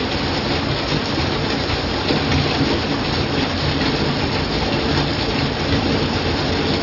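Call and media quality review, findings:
No faults found in this clip. Nothing to escalate from this review.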